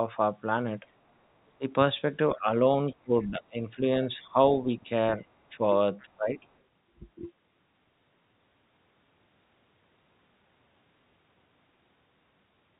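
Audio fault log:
1.58–1.64 s, 2.37–2.48 s, 2.92–3.86 s, 4.19–5.61 s, 6.03–6.36 s: speech suppressed in double talk. The echo canceller likely misjudged simultaneous talk as echo, so the talker's speech dips by about 10 to 25 dB, deepest in the 2.92–3.86 s stretch.
2.87–3.26 s: other side's voice leaking through. Far-end audio that was likely missed by echo cancellation remains in the microphone signal as a very faint second voice, about 35 dB below the talker and limited to 4 kHz like the rest of the call.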